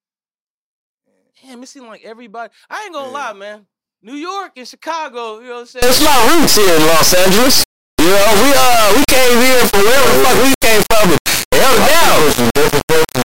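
From 5.82 s, after "you know what I'm", an integer read as float fault turns speech into a harsh, extremely loud buzzing square wave, which fits 32-bit integer samples decoded as 32-bit float.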